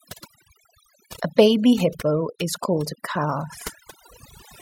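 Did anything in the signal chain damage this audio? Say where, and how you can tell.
Yes. The damage sits at the call-processing stage, where overdone noise removal runs across the whole speech clip. The gaps between phrases drop to near silence, scattered with brief twinkling specks. The suppressor was set so aggressively that any frequency band close to its noise estimate was pulled down or muted, and the softer parts of the voice went with the noise. A low-bitrate codec smears tone more evenly across the signal, but here the tonal gaps follow the noise floor.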